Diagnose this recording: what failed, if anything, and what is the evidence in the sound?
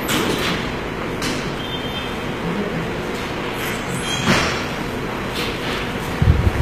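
The failure is at the codec stage, and it runs the whole length. Nothing comes through above 14.9 kHz, and the bright top end sounds gritty and metallic, plainly damaged. That's likely HE-AAC compression at a low bitrate, around 20 kbps, with the treble rebuilt from copied lower bands.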